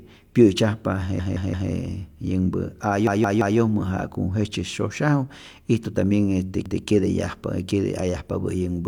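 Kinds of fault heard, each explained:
Repeated buffer: the playback device ran short of fresh audio and replayed its last buffer instead. A chunk of speech about 171 ms long, which fits an 8192-sample buffer, sounds again with a hard join at each restart. It is a stutter: three extra plays from 1.20 to 1.71 s and again from 3.07 to 3.58 s, then one extra play from 6.66 to 6.83 s. Essentially none of the speech is skipped.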